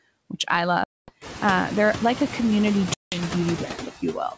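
Throughout the speech, noise suppressor artifacts are audible. The suppressor pulls steady-noise bands down by about 16 dB frame by frame, so the background drops away in pauses and swells back under the voice. The room noise rises by about 18 dB near 1 s. On a spectrogram, the floor between words looks patchy, with isolated time-frequency specks that come and go instead of a smooth noise bed.

From 0.84 to 1.12 s, and again from 2.94 to 3.24 s, there is packet loss on an ADPCM call. The first hole is about 240 ms of silence and the second about 180 ms, each consistent with roughly ten lost packets. The waveform drops to silence with hard vertical edges. Because the decoder's adaptive predictor and step size lose sync with the sender's, the speech re-enters slightly distorted and settles over the next few tens of milliseconds. On the spectrogram this shows as a blank column.

Between 3.76 and 4.34 s there is speech cut by the noise suppressor. 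In that stretch the suppressor mistakes about 150 ms of speech in total for noise and turns it down, by up to about 9 dB. Soft consonants and word endings sound swallowed or faint. In the waveform the envelope dips sharply at those points, and the spectrogram shows the weak high-frequency consonant energy thinned or missing. Above 8 kHz nothing appears anywhere in the clip, as expected for this wideband call path.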